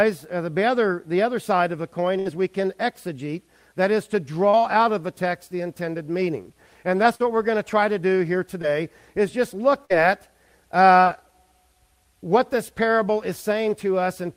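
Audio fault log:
2.19–2.27 s, 7.15–7.22 s, 9.85–9.92 s: burst of packet loss. The receiver holds the last sound for roughly 50 ms, fading it, then skips ahead past 40–60 ms of missing audio.
4.49–4.55 s, 8.62–8.65 s, 11.04–11.08 s: short concealed packet loss. These are quick smears where the last sound is extended for 11–40 ms and blended back, losing 20–40 ms.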